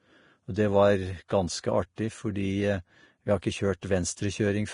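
Heavy lossy coding, likely Vorbis compression, quantises the treble coarsely and removes everything above 10.5 kHz. That fits a bitrate near 31 kbps and leaves the speech hissy and grainy throughout. Pre-echo follows at 1.28 s, 1.96 to 1.98 s and 3.81 s: block quantisation noise spreads ahead of sharp attacks, putting roughly 20 ms of hiss before each and smearing it.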